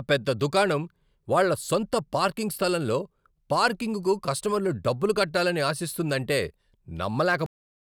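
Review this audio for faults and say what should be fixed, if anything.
The final buffers of the recording were never written out, leaving a cut-off end at 7.46 s: the speech stops partway through a sound and falls straight to digital silence with no decay, and that silence fills the last 0.41 s. Draining and flushing every queued buffer before the writer closes the file would prevent it.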